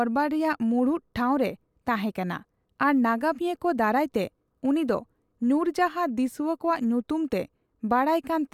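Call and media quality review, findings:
No faults found in this speech clip. Nothing to escalate.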